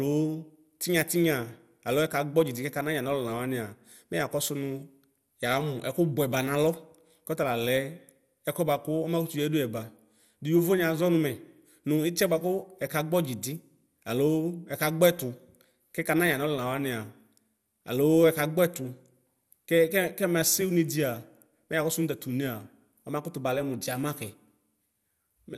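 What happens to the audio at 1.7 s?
At 1.7 s the speech carries the same damage heard throughout the clip: a dull, gurgling, granular texture with nothing above 16.6 kHz. This is likely MP2 compression at a low rate, consistent with roughly 80 kbps. Too few bits leave the upper sub-bands flickering in and out and the rest coarsely quantised. Unlike a plain low-pass filter, the band edge isn't steady, and the grainy distortion sits inside the remaining sound.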